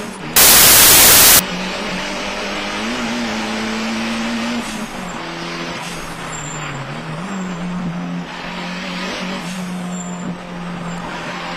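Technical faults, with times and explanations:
0.36–1.39 s, samples built from the wrong bytes: the reader misassembled each sample's bytes, promoting fast-changing low bits to the top, so the sound becomes loud, harsh broadband noise.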